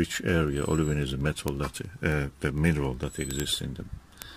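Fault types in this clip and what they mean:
Word clock ticks: The receiving device reads a digital link on its own clock, which is not locked to the sender's. The two clocks drift apart by roughly 300 parts per million. Each time they slip past each other, a single sample is dropped or repeated and a few neighbours are misread. That produces a steady train of sharp ticks about every tenth of a second. They run from 0.11 s to 4.31 s, around fifty in all.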